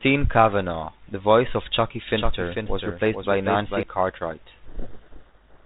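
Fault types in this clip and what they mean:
Doubled audio track: From about 2.09 s to 3.83 s a second copy of the speech rides along behind the original, roughly 0.4 s late and around 5 dB quieter. It's full-band and dry, with no room tail, so it sounds like a stiff echo rather than reverb, and it cuts in and out abruptly at both ends. The likely cause is the same audio being picked up again through a slower path, or an edit that left two copies out of step.
Codec payload misread: From about 4.68 s right through to the end, the speech is buried in harsh, grinding distortion. Both ends are running G.726, which is otherwise coming through fine at 32 kbit/s with its usual 4 kHz telephone ceiling, but here they disagree on the bit order within each code word. The decoder keeps reading frames that look valid, just with the bits scrambled, and it never recovers before the clip stops.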